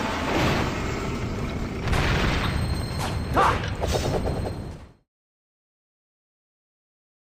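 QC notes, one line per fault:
No faults heard; the level eases out near the end.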